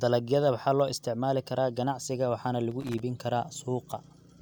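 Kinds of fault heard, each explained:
Loose connector crackle: A worn or dirty contact keeps making and breaking the signal path. That chops the audio into an irregular scratchy crackle. Here it comes just after "isticmaali karaa ganacsiga waxaana", from 2.71 to 3.00 s, lasting under a third of a second.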